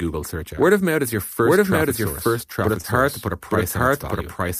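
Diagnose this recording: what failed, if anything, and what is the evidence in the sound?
The speech is heard twice throughout. A second full-band copy runs about a second behind the first, at about the same loudness. It carries no reverb tail or room colour, so it is not an acoustic echo. It is a doubled audio track. The likely cause is a second capture path with extra delay, or an edit that left two copies out of step. The stage is capture routing or editing, not the room.

There are two short concealed packet losses, a network fault handled in the codec. The first is at 0.55 to 0.59 s. The second is at 2.81 to 2.86 s, right after "first traffic source but". Each is a brief smear of a few hundredths of a second. The decoder lost a packet's worth of audio and filled the gap by extending the preceding sound. It then blended back into the real signal. The fill is audible as a wobble.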